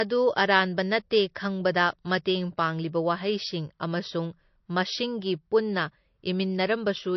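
From start to finish, the speech carries plainly audible damage, likely from MP3 compression. Nothing is left above 5.9 kHz, so the top end is sheared off and s sounds lose their edge. The encoder seems starved of bits, which fits a low bitrate near 32 kbps. With too little data, it drops quieter frequency detail and lets it flicker in and out. The result is a thin, watery, swirling quality over the whole voice.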